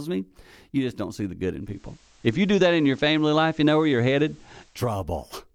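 Digital radio blending to analogue runs from 1.59 s to 4.90 s in this speech clip: the receiver loses its digital stream and cross-fades over 284 ms to the FM broadcast, bringing up faint hiss well below the speech and a level shift of about 5 dB, before blending back.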